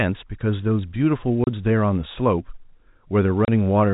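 A speech recording over G.711 telephone coding, with nothing heard above 4 kHz, has two packet losses filled with silence, from 1.44 to 1.47 s and from 3.45 to 3.48 s. Each 30 ms hole fits one lost packet. On a waveform the signal drops abruptly to silence, and on a spectrogram a full-height vertical blank gap appears with hard edges.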